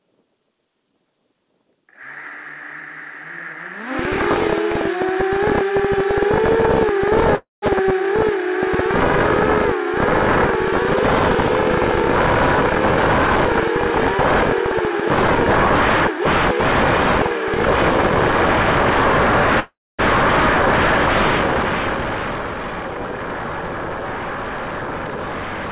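Call audio freeze at 7.36 to 7.64 s: the sound stops moving forward, its last moment drawn out as a fading buzz that drops to near-silence for about 0.17 s before resuming where it left off. This is likely packets stalling in transit and the jitter buffer running dry, inserting roughly 0.26 s of delay without losing any material.

Jitter buffer speed-up from 12.70 to 13.49 s: the audio runs at about 113% of normal pace with its pitch unchanged, so it sounds hurried. After a backlog built up, the receiver trimmed many tiny pitch-period slices, about a tenth of a second in total, to shorten the delay.

Short concealed packet loss at 15.27 to 15.30 s: around 40 ms of audio never arrived in time. Only a few milliseconds were bridged by extending the preceding sound before blending back, so a brief smear or wobble marks the spot where material is simply missing.

Call audio freeze again at 19.60 to 20.01 s, longer this time: a decaying continuation gives way to about 0.24 s of near-silence, adding roughly 0.39 s of delay with nothing lost, likely from another stall in packet delivery.

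Throughout, the band stops at 4 kHz with the coding noise of the call path, which fits G.711 A-law.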